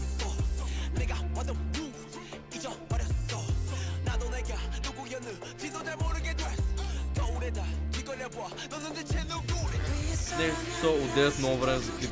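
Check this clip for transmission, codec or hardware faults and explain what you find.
No faults can be heard anywhere in the clip. There is nothing to flag at any point in the audio.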